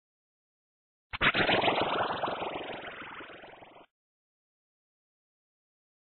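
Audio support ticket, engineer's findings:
No faults found on listening; no dropouts, clicks, distortion or level problems to report. Nothing further to trace in the playback chain for this clip.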